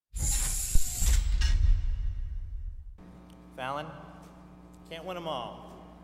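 A deep thump lands at 0.75 s, peaking around -9 dBFS and dying away within about 31 ms by 0.89 s: a phantom power thump, the supply switching on or off on a live input.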